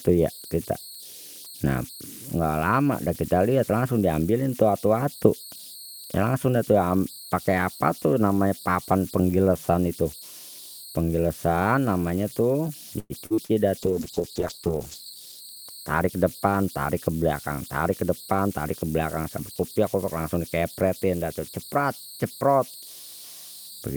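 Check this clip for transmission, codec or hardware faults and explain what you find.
The speech carries four faults: one throughout, and three packed between about 13 and 17 seconds.

Converter idle tones run for the whole clip. An undithered delta-sigma converter settles into repeating bit patterns on small input, producing a thin whistle around 4 kHz, about 20 dB below the speech. It is clearest in pauses. Unlike hum, it is a high tone that does not follow the mains frequency.

Repeated packet loss (robotic sound) runs from 12.99 to 13.55 s. Four gaps, the longest 106 ms, are patched by stretching the previous sound, so about 41% of that stretch is synthetic. The result is choppy, with pieces missing. Unlike a single dropout, the holes recur in quick succession.

A call bitrate drop runs from 13.79 to 16.70 s. The sound turns muffled and watery, which fits an encoder rate falling from around 48 kbps to 9 kbps and staying lowest for 1.16 s. 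The coarser coding also removes the highs. Unlike packet loss, this degradation is continuous, with no holes.

A jitter buffer speed-up runs from 15.34 to 16.10 s. To shed excess buffered delay, the receiver cut short pitch-period pieces, removing about a tenth of a second. The speech runs at 112% speed and sounds hurried. Unlike a resampling error, the pitch stays unchanged.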